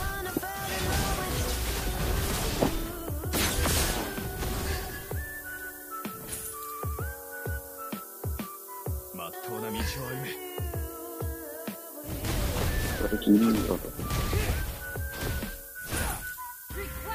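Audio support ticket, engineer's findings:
Low bit depth with noise shaping throughout: a steady, thin hiss that climbs toward the top of the band and sits nearly as loud as the signal. This fits 6-bit quantisation, with the rounding error fed back and pushed upward in frequency. On a spectrogram it appears as a constant noise floor that rises steeply into the high frequencies.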